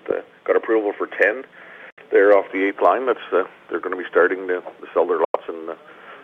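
At 1.90 s the sound cuts to silence until 1.99 s, and again from 5.25 s to 5.37 s. Both gaps start and end abruptly or with a fade of a few milliseconds, and the sound resumes further along, as if it had kept playing. This is likely a Bluetooth dropout, with packets arriving too late and being discarded.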